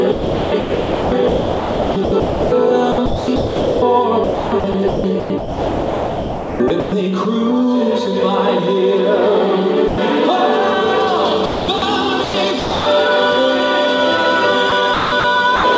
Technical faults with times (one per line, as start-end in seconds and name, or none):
0.12-6.92 sound chopped by the voice detector
9.88-9.98 sound dropped by the voice detector
11.46-12.86 sound chopped by the voice detector
14.70-15.64 sound chopped by the voice detector